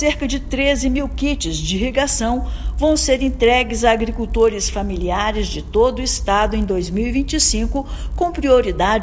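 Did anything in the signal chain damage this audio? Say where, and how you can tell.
Yes. Resampler restarted on every block, throughout: the 24 to 16 kHz conversion treats each 20 ms block alone, so edge errors produce a 50 Hz buzz under the sound.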